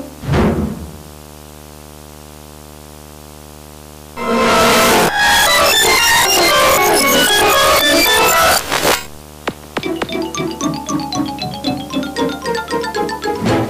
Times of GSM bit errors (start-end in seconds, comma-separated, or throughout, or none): none